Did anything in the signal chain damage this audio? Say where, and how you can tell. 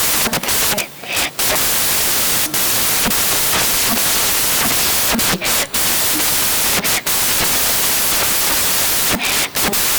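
Yes: at sample-format conversion, samples built from the wrong bytes turn low-order bits into loud, harsh broadband noise throughout.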